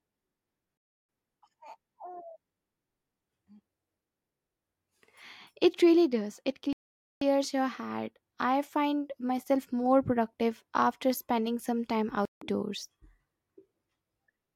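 Three times the speech drops to dead silence and then resumes: at 0.77 to 1.09 s (0.32 s), 6.73 to 7.22 s (0.49 s), and 12.25 to 12.42 s (0.16 s). This is likely a Bluetooth stall, where interference delayed packets until the receiver's buffer emptied and playback halted for the retransmissions. On the waveform each gap is a flat line with abrupt edges, and on the spectrogram a clean vertical blank band across all frequencies.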